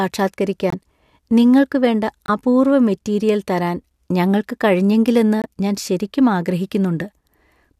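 At 0.70 s, 2.26 s and 5.42 s the speech drops into sudden silence for about 40 ms each time. That's the corrupt frame muted fault: flipped bits left compressed frames undecodable, so the player swapped in digital silence instead. The holes cut in hard, with no fade, and their lengths fit one or two codec frames each. The rhythm carries on unbroken afterward, since timing is kept.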